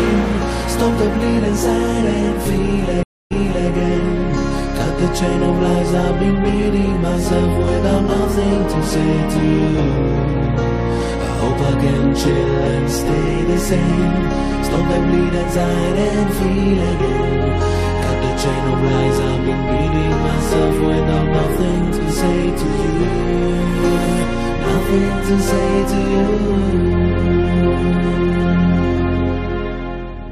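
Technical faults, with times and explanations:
3.03 to 3.70 s, stream reconnect: a 0.28 s silence, then a fresh decoder fades in 0.4 s earlier, repeating material rather than simply dropping out.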